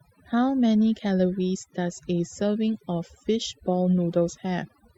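Throughout the speech, the background drops and breaks up into twinkling specks: overdone noise removal, pushing frequency bands near the noise estimate far down, quieter voice detail included. All the way through, small timing hiccups recur unevenly, pointing to clock drift between sender and receiver, with the sender's clock running roughly four percent fast. From 0.00 to 4.98 s come repeated timing corrections, as the receiver keeps cutting short pieces to keep pace, playing the audio at 104% speed.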